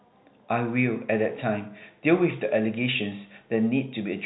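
Nothing here counts as a fault: the speech comes through as ordinary G.711 telephone audio, with everything above about 3.9 kHz gone just as you'd expect from a phone line.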